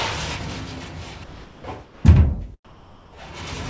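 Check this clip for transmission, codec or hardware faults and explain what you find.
One transmission fault appears three times: comfort noise in place of the background. The call path's bandwidth stops at 8 kHz, which fits G.722.

Between 1.24 and 1.64 s, 1.84 and 2.04 s, and 2.65 and 3.13 s, the quiet background becomes a smooth, featureless hiss at about -2, -4 and +2 dB relative to the real background. The likely cause is discontinuous transmission: the receiver synthesised shaped noise while the sender paused. A dropout or gate would leave silence instead.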